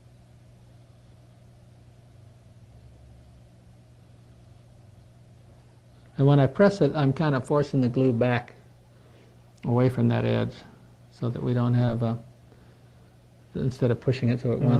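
At 11.85 to 11.89 s there is a short concealed packet loss: about 20 ms of the stream arrived too late, and the receiver bridged the hole by extending the preceding sound before crossfading back. It is heard as a brief smear rather than a hard silent gap or a click. The audio is carried through the call codec with its top end stopping around 12 kHz.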